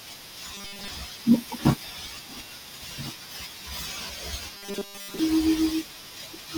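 Robotic sound from repeated short buffers at 0.55–0.88 s and 4.55–5.19 s: the speech becomes a rigid 200 Hz metallic buzz, likely from roughly 5 ms buffers replayed in place of most incoming audio.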